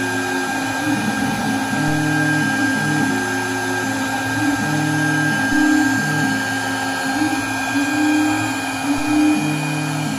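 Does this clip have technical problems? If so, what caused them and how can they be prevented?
Yes. DC steps occur at 5.53 s and 8.98 s. Each time the zero line jumps by about -21 dBFS and thumps. It then drains away over a fraction of a second. Prevent this by blocking DC ahead of any input switching or recalibration.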